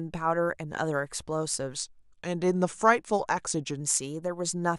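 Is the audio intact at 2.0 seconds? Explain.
No, 2.0 seconds falls inside a wrong sample rate stretch running from about 1.77 to 3.80 s. The samples are played back slower than they were captured, with no conversion, so speed and pitch drop together by the same ratio. That's a speed of 0.919 and a pitch drop of about 1.47 semitones, which fits 48 kHz material played at 44.1 kHz. The speech there sounds a touch lower and more sluggish.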